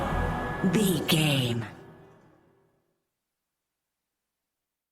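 A call bitrate drop runs from 1.66 s to 3.77 s. The connection's bandwidth estimate fell, so the encoder was pushed to spend far fewer bits on the audio. For roughly 2.04 s the sound turns coarse and muffled, with the upper frequencies trimmed away and a watery texture, which fits a fall from around 64 kbps to around 26 kbps. Full detail returns once the bitrate climbs back near 3.77 s.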